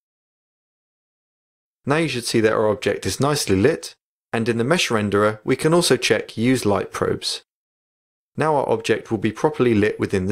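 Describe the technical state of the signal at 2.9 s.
At 2.9 s the signal is intact, with no dropout, distortion, glitch or other fault audible.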